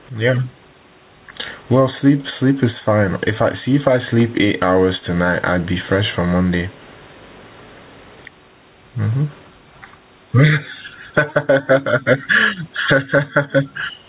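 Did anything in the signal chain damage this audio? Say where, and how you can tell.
Yes, gain pumping is audible throughout the speech, at the input gain and dynamics stage. The room noise sits about 44 dB below the speech, and the gain swings by roughly 15 dB. The likely cause is an input gain set far too high, with a fast limiter or compressor clamping down on each loud sound. That compresses loud and soft passages toward one level and leaves the speech squashed.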